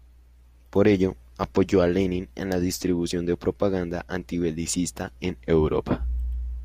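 At 4.33 s, just after "la distribución de propaganda", a corrupt frame decoded: one damaged frame was played as-is, producing a brief, quiet glitch of misplaced energy, around -40 dBFS.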